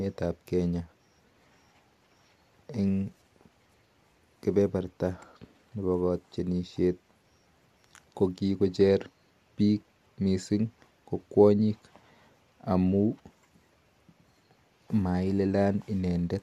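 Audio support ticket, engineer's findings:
Speech signal reviewed in full with no faults found and no action required.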